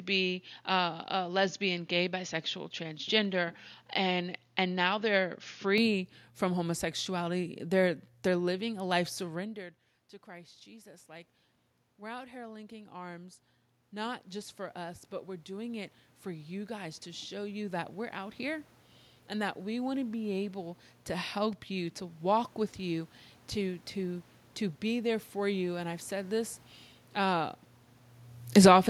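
At 9.18 s, just after "they're living a life", the level at the microphone drops by about 20 dB as the talker moves away, around 9.5 s. The automatic gain rising response follows: the control reads the input as too quiet and climbs slowly, adding about 18 dB by 26.42 s. Because the gain acts on everything it receives, the room noise swells along with the voice across those seventeen seconds.

From 28.4 to 28.82 s the opposite happens. The talker moves again around 28.0 s, and the automatic gain falling response pulls the gain down by about 10 dB over roughly 0.4 s. The voice sinks, and the background noise drops with it in the same motion.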